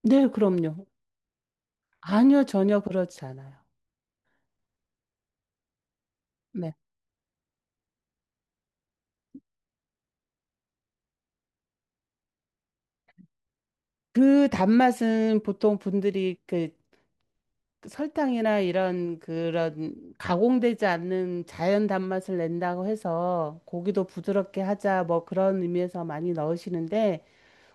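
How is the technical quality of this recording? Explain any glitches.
Nothing wrong can be heard anywhere in this recording.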